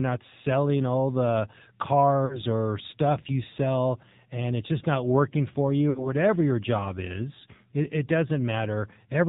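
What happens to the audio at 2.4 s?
Lost AMR speech frames cause a dropout between about 2.26 and 2.39 s, just before "or stuff you sell". Radio errors spoiled the data, so the decoder had nothing valid to play. It kept reusing the last good pitch and vocal tract settings while lowering the gain. The sound stretches out and fades toward silence. About 40 ms of audio is missing, which fits two lost frames. The speech then returns weak or rough for a moment.

This happens within the AMR narrowband mobile codec, which runs through the whole clip at 7.4 kbps. Its damage is plainly audible. Sampling is at 8 kHz, so nothing above 4 kHz passes. The speech is rebuilt from a vocal tract model, a pitch predictor and a few pulses every 5 ms. At this bitrate the voice sounds buzzy and synthetic.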